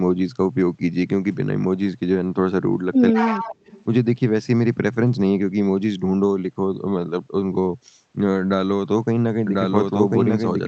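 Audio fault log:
3.12–3.45 s, speech suppressed in double talk: the sound dips by roughly 15 dB over about 300 ms while the far side is talking. The likely cause is an echo canceller that could not tell the local talker from its loudspeaker echo during the overlap, so it attenuated everything it heard at once, including the wanted speech, until the overlap ended.
3.17–3.84 s, echo leak: a delayed copy of the speech arrives 145 ms behind the original, about 10 dB below it. This is likely the far end's echo canceller leaving part of its loudspeaker pickup in the microphone feed, which was then returned over the call. The 145 ms spacing is long enough to hear as a separate repeat rather than as room colour.
9.47 s to the end, doubled audio track: a second full-band copy of the sound enters abruptly and runs to the close of the clip, at about the same level as the original and trailing it by roughly one second. 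The copy shows no decay or added reverberation, which points away from acoustic echo and likely toward a duplicate capture through a slower path or two misaligned copies left in an edit, both of them audible at once.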